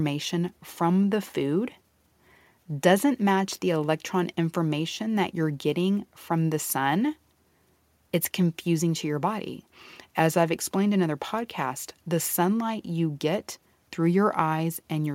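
Nothing stood out on listening to the speech in this recording.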